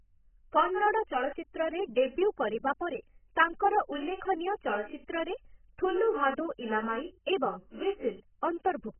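From start to finish the speech has its top end cut off and sounds dull and smeared, with a warbling, fizzy texture. That heavy damage is likely AAC compression at a very low bitrate, around 10 kbps, which is what sets it apart from a clean low-pass filter.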